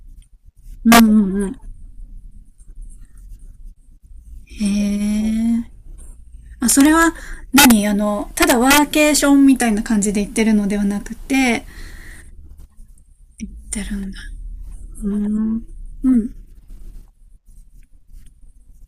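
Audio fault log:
0.92–1.00 s, 6.70–7.03 s, 7.58–7.72 s, 8.42–8.78 s and 9.17 s: integer overflow. Speech peaks driven about 0 to 6 dB past the maximum wrap to the opposite sign rather than flattening, so each gives a violent crack, far sharper than clipping's blunted distortion.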